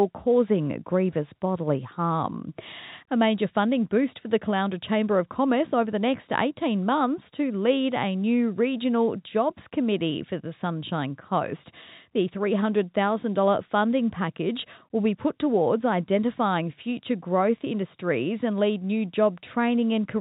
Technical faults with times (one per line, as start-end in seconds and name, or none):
none